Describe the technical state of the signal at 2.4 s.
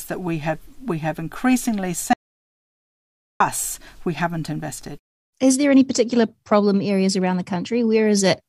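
At 2.4 s the speech has cut out completely: an audio dropout to silence runs from 2.13 to 3.40 s, about 1.27 s of silence with no room tone left. The input was likely lost while the recorder kept writing silence, so whatever was said then is gone.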